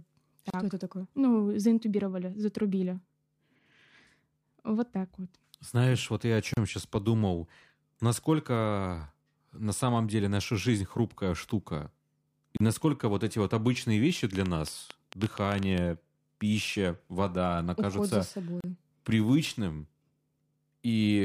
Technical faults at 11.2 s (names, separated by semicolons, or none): none